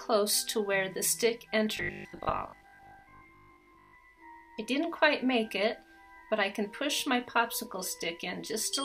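Robotic sound from repeated short buffers runs from 1.77 to 3.97 s. Across that stretch the sound collapses into a stiff, metallic buzz pitched at 50 Hz that only loosely tracks the underlying audio. The likely cause is new audio arriving too slowly, so playback keeps looping a short chunk, around 20 ms going by the buzz pitch, while genuine material is dropped. Roughly half of what is heard there is repetition.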